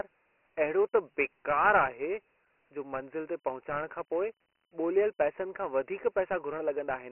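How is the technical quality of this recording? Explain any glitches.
The technical quality is poor: the speech is thin, gritty and band-limited from start to finish.

Dialogic VOX ADPCM damage runs through all of it. Each sample is coded as a coarse 4-bit step, and the top of the band ends at 3 kHz, which fits a 6,000-samples-per-second VOX file. Heavy granular hiss rides on the speech. On a spectrogram, energy is cut off sharply at 3 kHz and the low end is thin below about 300 Hz.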